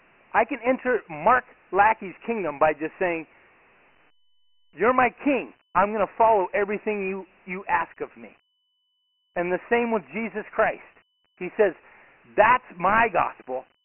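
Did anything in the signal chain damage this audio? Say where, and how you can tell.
Yes. Dialogic VOX ADPCM damage runs throughout the speech, from the codec stage: nothing above 3 kHz survives, and a gritty, heavy hiss tracks the speech. The 4-bit coder's coarse steps point to roughly 24 kbps at 6,000 samples a second.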